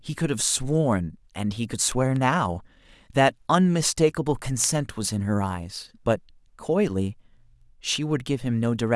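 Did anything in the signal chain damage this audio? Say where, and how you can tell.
Yes, word clock ticks at the digital link into the converter. From 0.18 s to 8.86 s, sharp ticks of uneven strength recur about every 0.3 s, some forty in all, seen as evenly spaced thin vertical lines. A receiver clock off by roughly 150 ppm slips one sample each time.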